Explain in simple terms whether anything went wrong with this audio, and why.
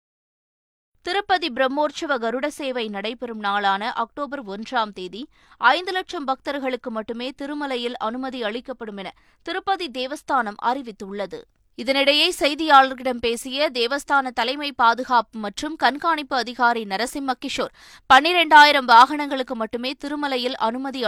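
Nothing went wrong: the speech runs without any dropout, glitch or distortion anywhere in the recording.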